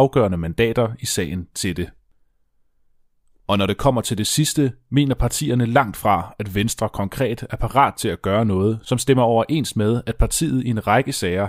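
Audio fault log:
No fault can be heard anywhere in the speech recording. Nothing in the audio calls for an entry in the log.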